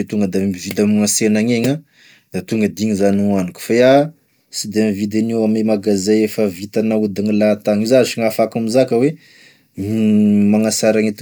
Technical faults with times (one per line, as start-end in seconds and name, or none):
none